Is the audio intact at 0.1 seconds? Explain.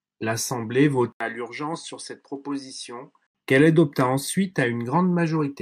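Yes, the speech at 0.1 seconds is intact, with no audible fault at that moment.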